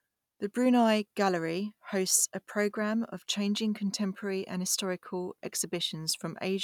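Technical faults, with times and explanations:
No technical faults can be heard in the speech signal.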